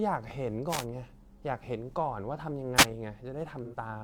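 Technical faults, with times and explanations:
0.67–0.86 s and 2.76–2.85 s, wireless microphone noise hit: two brief bursts of static swish over the speech. The analogue FM radio link fades as reflected signals cancel at the receiver, and its noise floor rises into the audio until the signal recovers.
3.63–3.75 s, AAC frame loss with concealment: about 85 ms of audio goes missing, which fits two lost frames. The decoder fills the gap by reusing the last good spectrum, so the speech turns briefly smeared and phasey.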